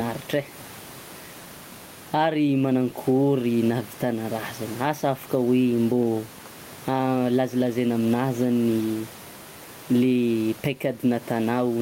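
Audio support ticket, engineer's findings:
Gain pumping, throughout clip. Gain swing around 10 dB; room noise, about 29 dB below speech. Likely cause: input gain far too high, fast limiter/compressor clamping every peak. Dynamics squashed.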